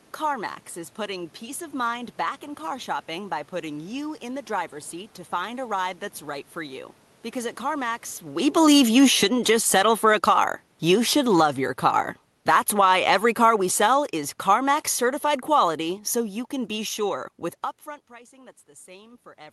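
At 8.54 s, just before "with upfront pricing", the automatic gain control starts falling: it has judged the input too loud or its background noise too strong and pulls its gain down by about 16 dB over the next several seconds, easing off only at 17.2 s. Speech and room noise sink together, which separates it from the talker moving, since a change in distance near 8.0 s alters the voice level but leaves the background steady.

Inside that decline, from 9.41 s to 10.73 s, the automatic gain rises by about 3 dB, lifting voice and room noise together over roughly 1.3 seconds before the downward drift takes over again. Because the background swells in step with the speech, this is the gain control reacting to a passage it heard as too quiet, not the talker coming closer, which near 17.5 s changes only the voice.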